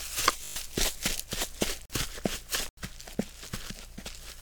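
A system hang loop runs from 0.44 to 0.56 s: the driver stalled while the hardware kept replaying one 20 ms slice of its ring buffer six times, producing a brief 50 Hz buzz in place of about a tenth of a second of the sound.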